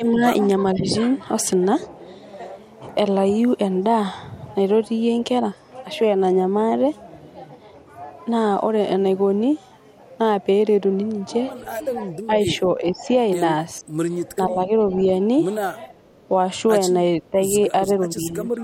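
Speech suppressed in double talk, likely from an echo canceller that could not tell the near talker from loudspeaker echo and turned both down, pulls the speech level down in short bites at 0.00–0.23 s, 0.74–0.90 s, 12.05–13.08 s, 13.81 s, 14.47–14.93 s, 15.89–16.17 s, 17.20–17.39 s and 18.13–18.63 s. Each dip lasts from a few tens to a few hundred milliseconds and drops the speech by around 10 dB, deepening to about 15 dB near 16 and 17 s.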